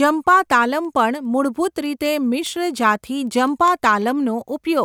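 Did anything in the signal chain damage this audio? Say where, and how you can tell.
Yes. Word clock ticks from an unlocked digital link: sharp, uneven ticks in the speech about every 0.2 s from 0.24 to 4.69 s. They show as thin full-height spectrogram lines, consistent with a clock error of around 100 ppm slipping one sample per tick.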